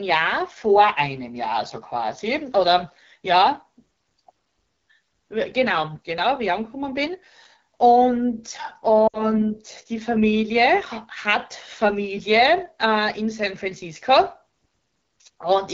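Throughout the recording the speech carries the rough, raspy texture of the AMR wideband (HD Voice) codec running at one of its lowest modes. The damage is plainly audible and is consistent with the 8.85 kbit/s rate. The codec models speech up to 6.4 kHz with a pulse-excited vocal tract filter and synthesizes the 6.4 to 7 kHz band from shaped noise. On a spectrogram, harmonics look coarse below 6.4 kHz, a smooth noisy band with no harmonic lines sits above it, and nothing appears beyond 7 kHz.

From 9.08 to 9.34 s there are lost AMR speech frames, a run of about 60 ms of missing audio that fits three consecutive 20 ms frames failing their checksum. The decoder repeated the last good pitch and vocal tract settings while ramping the gain down. The result is a sound that drops to near silence within two frames before speech returns weak and rough. In the waveform, the envelope decays sharply across the gap. 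The spectrogram shows frozen harmonic bands dimming quickly away.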